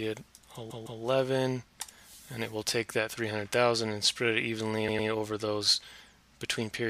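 At 0.69 s a roughly 157 ms chunk plays two extra times, running to 1.01 s, and at 4.87 s a 105 ms chunk does the same through 5.08 s. Those are repeated frames: compressed blocks resent, so each stutters.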